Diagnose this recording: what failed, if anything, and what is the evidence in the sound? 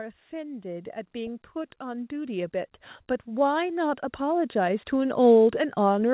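The failure is in call processing: automatic gain rising occurs twice, from 0.3 to 2.61 s and again from 3.25 to 5.21 s. Each time the speech and the background swell together by about 8 dB over roughly two seconds, because the gain control judged the input too quiet and raised its gain gradually. On the waveform the envelope widens as a slow ramp rather than a step. On the spectrogram the band below the 4 kHz narrowband ceiling brightens uniformly, noise floor included.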